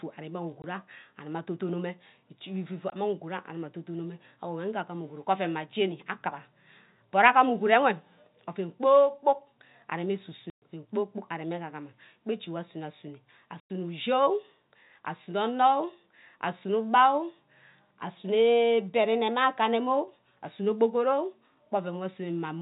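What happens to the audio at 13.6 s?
The speech drops out from 13.6 to 13.7 s. This is packet loss filled with silence. About 100 ms of audio never arrived, which fits five 20 ms packets. The receiver played silence instead, so there is a clean hole with hard edges.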